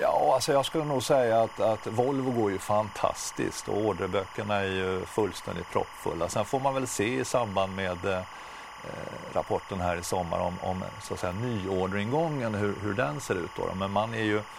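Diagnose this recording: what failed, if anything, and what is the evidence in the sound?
Timecode bleed in the analogue wiring: a chirping warble sits under the speech for the whole clip, roughly 15 dB down. Linear timecode at 25 frames per second leaks from a neighbouring cable. A spectrogram shows steady lines near 1 kHz and 2 kHz switching continuously.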